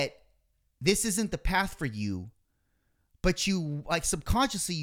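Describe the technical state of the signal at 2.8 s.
At 2.8 s the audio is intact, with no fault present at that moment.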